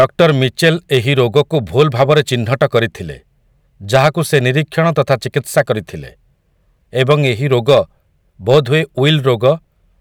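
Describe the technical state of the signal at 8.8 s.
Hard clipping affects 8.8 s, as it does the whole speech clip: the signal is driven about 6 dB past what the stage can pass, so the loudest peaks, under one percent of samples, are sliced flat, adding high harmonics heard as crackle on peaks.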